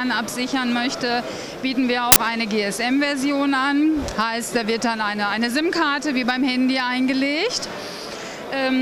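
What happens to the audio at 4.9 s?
Nothing goes wrong at 4.9 s: the audio runs on intact there, with no dropout, click, glitch or other audible fault at that point.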